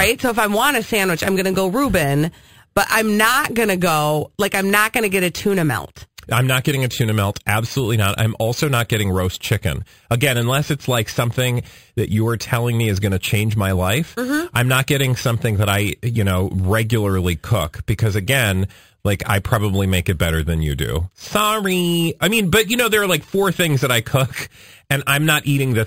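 Speech, affected throughout by imaging from sample-and-hold upsampling: a bright metallic fizz rides on the voice at about 15 dB below it. The lowest image sits near 5.5 to 11 kHz and moves opposite to the pitch, which fits an 11 kHz source raised to 48 kHz by repeating samples without a smoothing filter.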